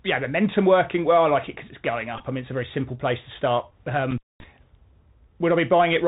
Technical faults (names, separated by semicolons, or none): Bluetooth CVSD headset codec; Bluetooth headset packet repeated; intermittent contact